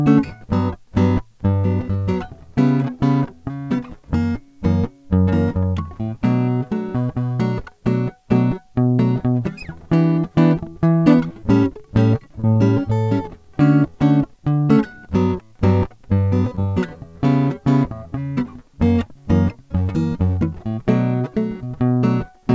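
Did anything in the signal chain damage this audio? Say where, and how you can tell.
Yes: short concealed packet loss on the network leg, at 12.40–12.45 s and 16.55–16.59 s. About 40 ms and 20 ms of music went missing. The decoder extended the preceding sound, so a spectrogram shows smeared, repeated partials, and the fill blends back into the real audio where it resumes.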